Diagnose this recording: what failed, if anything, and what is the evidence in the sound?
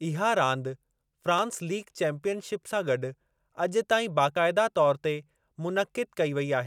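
Audio missing between chunks, at 1.39 s and 4.36 s. About 20 ms of speech vanishes each time. The 3 s spacing likely points to chunked buffering.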